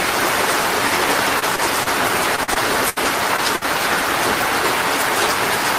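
A short everyday-sound recording with packet-loss faults. Short concealed packet loss appears at 1.39 to 1.44 s, 1.56 to 1.60 s, 1.84 to 1.88 s and 3.36 to 3.40 s. Each time about 20 ms never arrived, and the receiver extended the preceding sound before blending back. The result is a single brief smear or wobble, isolated rather than clustered. From 2.36 to 2.98 s, repeated packet loss (robotic sound) sets in. Four gaps, the longest 68 ms, are patched in quick succession, so nearly a quarter of that stretch is synthetic. That gives a choppy texture with pieces missing, sustained over the span, unlike the lone smears. At 3.56 to 3.63 s a burst of packet loss removes about 60 ms in one continuous hole. The concealment holds and fades the last sound as a buzz or hiss, then the audio resumes further on, a single longer dropout rather than a string of gaps.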